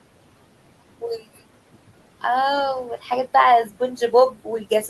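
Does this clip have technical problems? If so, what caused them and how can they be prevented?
Yes. Noise suppressor artifacts run throughout the speech: the suppressor lowers bands it judges steady noise by about 18 dB, so room noise sinks between phrases and returns under speech. A spectrogram shows dark gaps. Use gentler suppression or quieten the room.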